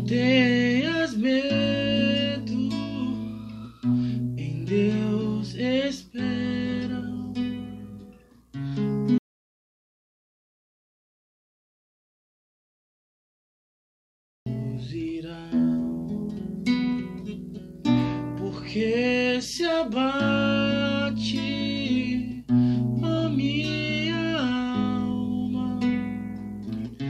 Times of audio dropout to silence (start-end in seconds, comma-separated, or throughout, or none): 9.18-14.46